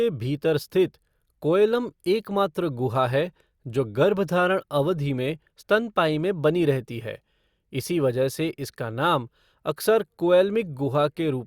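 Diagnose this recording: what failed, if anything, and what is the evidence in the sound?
Nothing in this speech recording points to a failure. No stage of the chain, from the wiring and converter through buffering, processing, transmission and playback, leaves audible evidence of a problem.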